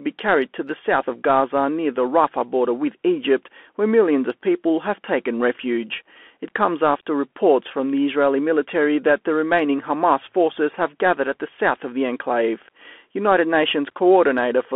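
Bluetooth CVSD headset codec damage runs from start to finish: the speech is squeezed into a telephone band of roughly 250 Hz to 3.4 kHz, with a 1-bit up-or-down coder, which fits a 64 kbps link. It loses the fast, loud high peaks, so s sounds turn scratchy over a steady granular hiss.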